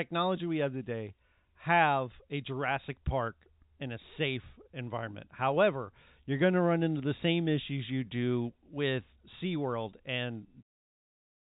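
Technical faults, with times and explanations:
No technical faults are audible: the speech sits in a telephone band, with nothing above about 3.8 kHz, as expected from G.711 mu-law coding at 64 kbps, and the level eases down in a smooth fade-out that begins around 10.5 s and ends at 10.64 s.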